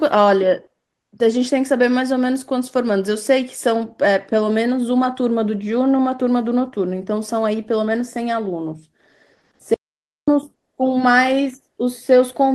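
A speech recording with an audio dropout to silence from 9.74 s to 10.28 s, where the sound cuts out mid-flow for about 0.53 s and returns abruptly. The gap is dead digital silence with no room tone, and whatever was spoken there is lost. On a waveform it is a flat, near-silent stretch; on a spectrogram, a fully blank vertical band edged by hard cuts. The likely cause is a brief loss of input while writing continued.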